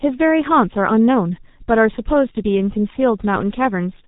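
Throughout the speech, the G.723.1 codec sets the sound. Nothing passes above 3.8 kHz, and the slow 30 ms frame updates smear consonants into a muffled, hoarse texture. The heavy coding damage fits a rate near 6.3 kbit/s.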